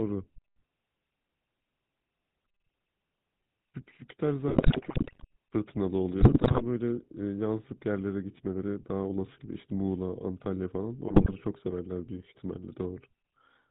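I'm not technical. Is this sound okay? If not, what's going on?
No. The whole clip went through the old GSM full-rate codec, which rebuilds speech from a rough model and drops everything above 4 kHz, so voices sound buzzy and gravelly. GSM bit errors from a weak phone link then corrupt the decoded speech, causing squawks, pops and gargling from 4.48 to 5.25 s, 6.20 to 6.63 s, and 11.08 to 11.35 s.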